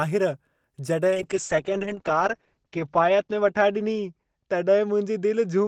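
At 1.08 s a call bitrate drop begins and lasts to the end. The encoder was starved of bits. The top end narrows from 20 kHz to 8 kHz, and the speech turns muffled and rough, consistent with a fall from 32 to 8 kbps.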